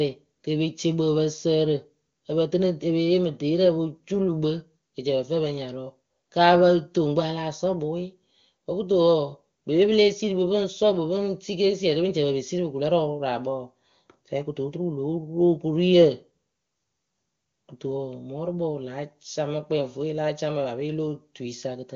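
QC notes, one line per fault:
No faults to note, with the speech carried over the AMR wideband (HD Voice) codec at its top rate.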